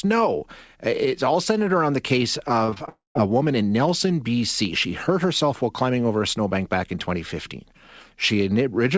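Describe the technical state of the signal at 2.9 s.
A long network dropout runs from 2.89 to 3.17 s, just before "a woman in". The likely cause is a stretch where no packets arrived. The receiver extends the last sound as a fading buzz, then about 0.16 s of silence follows before the audio resumes without the lost part.

Repeated packet loss (robotic sound) leads into it, from 2.66 to 2.89 s, after "centered around the case". Five short gaps, the longest 22 ms, are each patched by repeating the preceding sound, covering about 40% of that span, which gives a choppy texture with pieces missing.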